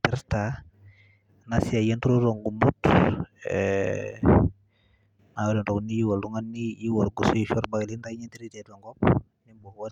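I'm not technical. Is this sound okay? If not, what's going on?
Yes, this sound is okay, with nothing going wrong in it.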